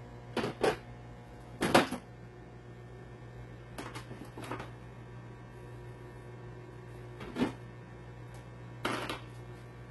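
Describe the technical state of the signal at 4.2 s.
At 4.2 s the signal carries the same damage heard across the whole clip, most likely HE-AAC compression at a very low bitrate, in the region of 16 kbps. The upper spectrum is not coded directly but regenerated by copying lower bands upward under a coarse envelope, so its harmonics no longer align with the real content below. The result is heavy artefacting: gritty, metallic treble, with nothing present above 11.8 kHz.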